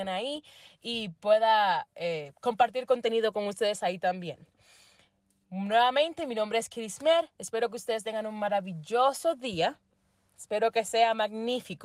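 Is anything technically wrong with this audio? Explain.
No, no technical faults heard.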